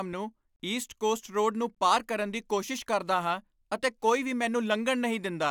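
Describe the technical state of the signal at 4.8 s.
At 4.8 s the speech signal runs intact, with no dropout, clipping, glitch or other fault to be heard at that point.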